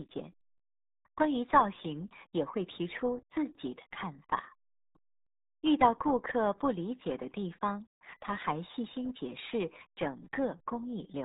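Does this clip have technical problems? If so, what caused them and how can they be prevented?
Yes. Throughout, the speech shows heavy RealAudio 14.4 codec damage: nothing passes above 3.8 kHz, and the gargly texture, unlike a clean low-pass filter's muffling, fits an 8 kbit/s dial-up speech coder. Prevent it by encoding with a modern codec at an adequate bitrate.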